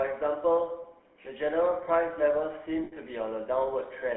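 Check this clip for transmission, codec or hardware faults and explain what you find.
Two faults are present: GSM full-rate coding across the whole clip, and a brief dropout of lost GSM frames near the end.

GSM full-rate codec, throughout. The speech has been passed through a telephone-band channel of roughly 200 Hz to 3.4 kHz, and through a coder that models the vocal tract and drives it with a coarse, regularly spaced pulse excitation. The damage is plainly audible as a buzzy, gravelly roughness, with no content above the band edge. This fits GSM full rate at 13 kbps.

Lost GSM frames, from 2.84 to 2.93 s. For about 80 ms the decoder received no usable data, which fits four consecutive 20 ms frames going missing. It covered the gap by reusing the parameters of the last good frame. The result is a short, held metallic ring in place of the speech, before normal decoding resumes.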